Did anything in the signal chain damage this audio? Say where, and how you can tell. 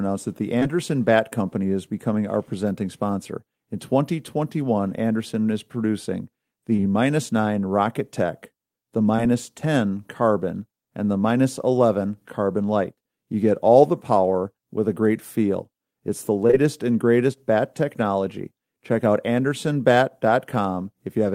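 Yes. The damage happened on the network, as short concealed packet loss. Each lost packet held about 20 ms of audio. Losses fall at 0.59, 0.63, 6.76, 6.80, 9.16, 16.47 and 16.51 s. Most come in back-to-back pairs, after "that the", after "is producing", and just before "and greatest bat technology". Each gap is a brief smear or wobble. The receiver extended the previous sound to cover it, then blended back. At 9.16 s the patch also stretches timing slightly.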